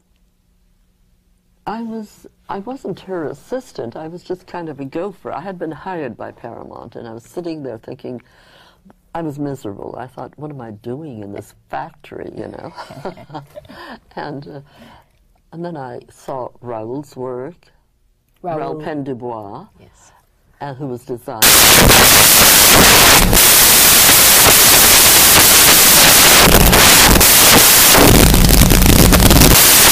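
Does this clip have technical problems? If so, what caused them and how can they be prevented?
Yes. From 21.42 s to the end at 29.92 s the audio turns into loud, harsh broadband noise, the sign of samples built from the wrong bytes. The reader has lost byte alignment or swapped byte order, so each sample is assembled from mismatched bytes and the rapidly varying low-order bits land in the most significant position. Prevention: validate the declared sample format, endianness and frame alignment before decoding, and resynchronise on frame boundaries.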